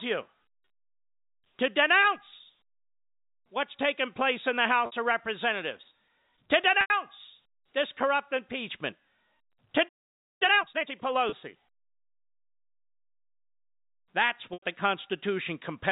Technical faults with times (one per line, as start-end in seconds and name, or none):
4.86-4.92 packet loss with pitch repetition
6.81-6.90 packet loss with pitch repetition
9.88-10.42 playback stall
10.42-10.92 time-compressed catch-up
11.29-11.33 packet loss with pitch repetition
14.53-14.62 packet loss with pitch repetition